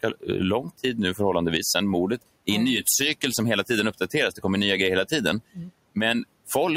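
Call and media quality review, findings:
Speech cut by the noise suppressor, 5.53 to 5.72 s. Part of the speech is pulled down by up to about 17 dB, roughly a tenth of a second affected in total. Probable component: noise suppressor, misclassifying low-level speech energy as noise and attenuating it together with the room noise, which sits about 23 dB below speech. Distinguishing from packet loss or dropout: level is reduced rather than gapped, with no click, repeat or concealment artefact.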